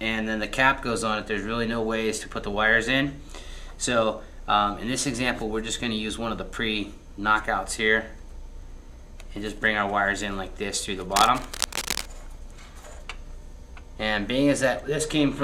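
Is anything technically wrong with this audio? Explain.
Yes. From 11.11 to 12.10 s there is cable scratch noise. Dense, uneven bursts of scratching and rustling sit over the sound, around 5 dB below it. The likely cause is a worn cable, connector or control being moved, so its contact resistance changes rapidly.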